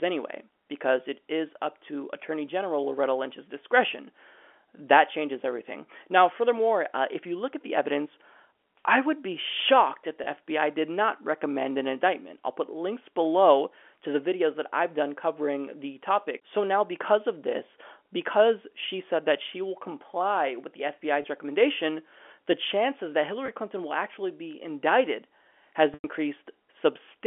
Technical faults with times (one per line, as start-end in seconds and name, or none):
10.24-10.26 packet loss with pitch repetition
21.22-21.24 packet loss with pitch repetition
23.46-23.48 packet loss with pitch repetition
25.94-26.04 packet loss with pitch repetition